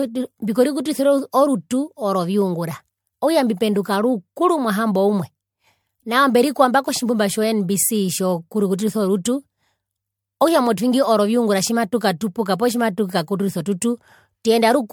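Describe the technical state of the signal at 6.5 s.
At 6.5 s the speech has a swirly, smeared, hollow quality, with consonant attacks blurred. This runs through the whole clip, not just this moment. The cause is likely generation loss: repeated MP3 decoding and re-encoding, around five passes, at a rate that points to 96 kbit/s. Each pass quantises on a shifted frame grid, so noise and spectral gaps accumulate, with nothing above about 19.9 kHz.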